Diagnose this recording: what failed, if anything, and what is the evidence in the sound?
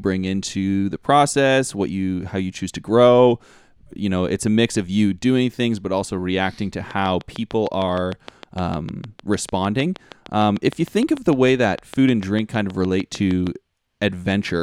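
Likely analogue-wiring interference injects a train of clicks from 6.91 to 13.48 s, after "but also reacting to": regular pops at 6.55 per second, peaking about 5 dB above the speech.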